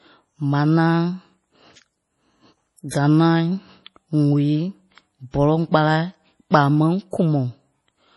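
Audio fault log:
Throughout: MP3 compression. Nothing is heard above 11.5 kHz, and the damage is heavy. The sound is watery and swirly, with chirpy sibilants. The encoder likely ran short of bits, which fits a low rate near 32 kbps. It dropped the treble and let weak frequency lines flicker between frames.
2.88–2.92 s and 7.11–7.13 s: pre-echo. A short hiss runs ahead of each sharp onset, for 39 ms and then 23 ms. The codec spread its coding noise across the whole block, so noise sized for the attack leaked into the quiet before it and softened the onset.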